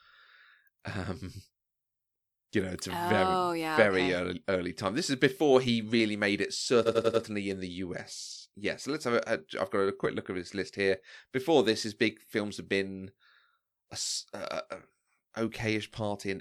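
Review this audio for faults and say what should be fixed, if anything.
Repeated frames from 6.85 to 7.22 s, right after "he really made it": a 92.9 ms chunk replays four extra times, stuttering and adding 0.37 s. Check the encoder's write path so buffers aren't resent.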